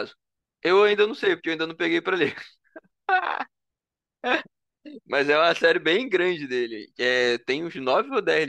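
No technical faults can be heard anywhere in this speech recording; the signal stays continuous and stable throughout.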